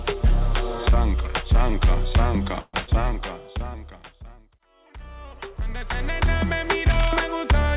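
At 2.60 s the audio stalls into a short buzzy or hissy continuation of the preceding sound that fades over about 0.13 s before the real signal picks up again at 2.75 s exactly where it left off. That is a call audio freeze, likely from packets delayed in transit so the jitter buffer ran dry. The receiver stretched the last sound to cover the wait, so nothing is lost, but everything afterward runs about 132 ms later than it should. Almost immediately after, from 2.83 to 2.89 s, there is a brief smeared wobble lasting a few hundredths of a second. This is short concealed packet loss: roughly 40 ms of audio never reached the decoder in time, and the receiver filled the hole by extending the last sound and then blending back into the real signal, so the original content of that moment is gone rather than delayed. From 6.90 to 7.09 s a burst of dense, uneven scratching rides over the sound at about 10 dB below the signal. 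That is cable scratch noise, likely from a worn cable, connector or control being moved so its contact resistance jittered rapidly. Throughout, the audio has nothing above 4 kHz, which fits a G.711 mu-law call path at 64 kbps.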